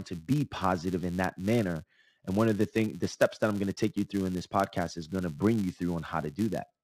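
From start to end, the speech carries a buzz at about 172 Hz. The cause is a filter restarted on every block. It loses its stored state at each block boundary and begins again from silence. That reset leaves a small transient at the start of every block. The ticks repeat 172 times a second, which fits a 256-sample buffer. They merge into a steady buzz that rises and falls with the speech level.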